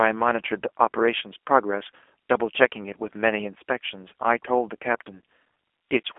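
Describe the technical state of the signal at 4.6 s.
At 4.6 s you're hearing the G.729 codec at work, and it runs through the whole clip, not just this moment. The speech is rebuilt from a vocal tract filter, a pitch predictor and a few pulses per frame, which fits an 8 kbit/s coder. So it comes out rough and a bit synthetic. The band sits in a phone-like 300 Hz to 3.5 kHz, with nothing above 3.7 kHz, and the damage is plainly audible.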